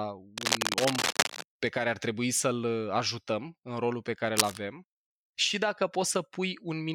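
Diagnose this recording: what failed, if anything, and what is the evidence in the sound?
The stage is analogue wiring. Cable scratch noise runs from 0.38 to 1.45 s and again from 4.37 to 4.57 s. Dense, uneven scratching bursts sit over the speech at roughly its own level. The likely cause is a worn cable or connector moving, so its contact resistance jumps rapidly.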